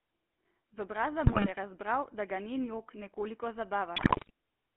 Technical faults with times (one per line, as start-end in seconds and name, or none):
0.00-4.76 GSM full-rate codec
1.26-1.52 GSM bit errors
3.96-4.30 GSM bit errors